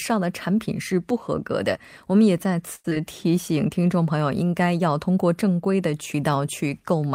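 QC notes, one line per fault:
2.75–2.86 s, short stall from a late packet. A packet arrived about 90 ms late and the jitter buffer ran dry. The receiver held the last sound for that 90 ms, then resumed where it left off. Nothing is lost, but the sound drags with a slight buzz or dip.
2.90–2.93 s, short concealed packet loss. Around 40 ms of audio never reached the decoder. The receiver bridged only briefly by extending the last sound, then skipped ahead, pulling the delay back by roughly 40 ms. It heard as a quick smear or wobble.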